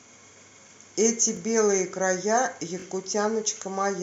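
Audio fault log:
1.37–1.39 s, repeated buffer: a 21 ms slice of speech plays twice in a row with a hard seam at the join, heard as a quick stutter or click. New samples missed the playback deadline, so the output resent its last block; the length fits a 1024-sample buffer. No audio is skipped.
2.80–2.84 s, repeated buffer: the same fault, but the block sounds three times, giving a longer stutter.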